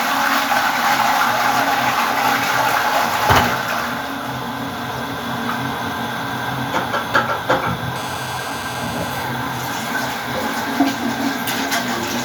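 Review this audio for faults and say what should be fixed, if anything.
GSM phone buzz from 7.96 to 9.24 s: a nearby 2G phone in a call pulses at about 217 Hz, which the audio circuitry rectifies into a steady, harmonic-rich rasp about 14 dB below the signal. To prevent it, keep mobile phones switched off or in flight mode and well away from microphones, cables and preamps during recording.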